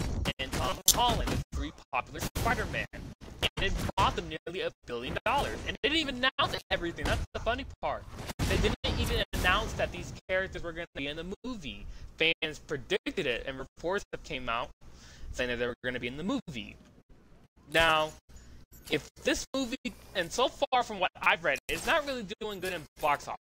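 Corrupt frame decoded at 0.69 to 0.92 s, again at 6.55 to 6.61 s and at 21.24 to 21.27 s: the audio is hit by short chirps and noise bursts where damaged compressed frames were played as if valid. Flipped bits make the decoder apply wrong gains or misread codes, throwing energy into the wrong frequencies. The first burst spans several frames and peaks loudly, near about -5 dBFS. The second covers roughly a couple of frames at a quieter level, and the last is a single-frame blip.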